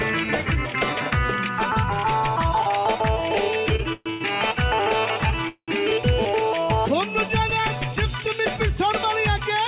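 Short stall from a late packet at 3.76 to 3.81 s: the jitter buffer ran dry, so the last sound is stretched by 27 ms before carrying on unbroken.

Call audio freeze at 3.93 to 4.08 s, 4.10 to 4.23 s and 5.49 to 5.70 s: the sound turns into a fading continuation lasting 128, 110 and 192 ms. The first ends in 10 ms of silence and the last in 80 ms of silence. These are likely caused by packets held up in transit. Each time, the audio resumes where it stopped, and the narrowband G.711 A-law path leaves nothing above 4 kHz.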